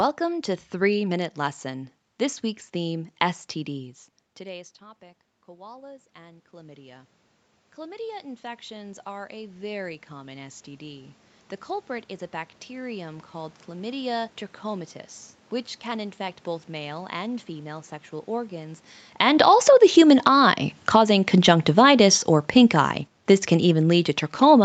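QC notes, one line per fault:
3.00–7.17 s and 7.75–11.20 s, automatic gain rising: Soon after the talker pulls back from the microphone around 4 s, the level drops by about 24 dB. The automatic gain control reads this as a weak input and raises its gain by about 8 dB over several seconds, twice. Because it amplifies everything it receives, the voice and the room noise swell together.
19.05 s to the end, automatic gain falling: Right after "and female sexual organs", following the talker's move at about 18.5 s, the gain control judges the input too loud or its background noise too strong and gradually lowers its gain through the end of the clip. The speech starts loud and then sinks, with the background sinking with it, since the control acts on the whole signal.
19.65–22.24 s, automatic gain rising: Inside that falling stretch, the gain control reverses and raises its gain by about 5 dB for roughly 2.6 s, then gives way to the downward trend again. 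Voice and background briefly swell together before continuing to fall. The result is an uneven level contour that does not follow the talker's own loudness.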